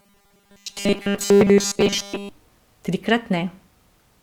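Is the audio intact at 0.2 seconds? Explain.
No. Robotic sound from repeated short buffers runs from 0.01 to 2.29 s. A rigid 200 Hz metallic buzz follows the speech only roughly. This is likely from a 5 ms buffer being repeated.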